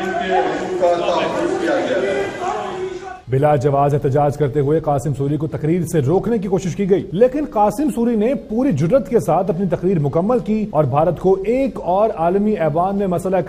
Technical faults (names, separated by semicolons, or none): none